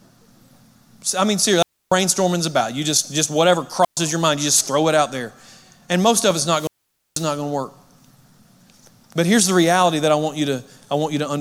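At 1.58 s, after "I mean", the speech breaks in a wireless microphone squelch dropout. Hiss rises, then about 0.29 s of near silence follows. The radio link from an analogue FM microphone faded, and the receiver's squelch muted its output. It recurs at 3.82 s, between "just just whatever" and "your mind you just", with a 0.12 s hole. At 6.45 s, after "most of it's", the gap lasts 0.49 s before "going to work".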